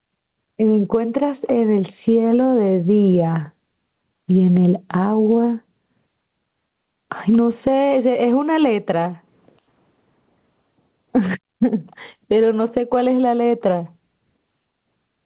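Gain pumping runs through the whole speech recording. The gain swings by something like 15 dB. The likely cause is an input gain set far too high for the microphone, with a fast limiter or compressor clamping down on each loud syllable and releasing in the gaps. The result is a flattened, squashed dynamic range. The narrowband call path, with nothing above 4 kHz, limits the top end.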